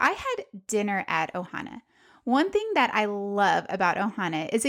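Sample clock jitter runs through the whole speech recording: the converter's timing wanders by about a microsecond, so each sample lands slightly off its proper instant, and the error grows with how steeply the waveform is changing. It sounds like a fine grainy hiss riding on the loudest, brightest syllables, roughly 40 dB down. Unlike a steady noise floor, it collapses to nothing in the pauses.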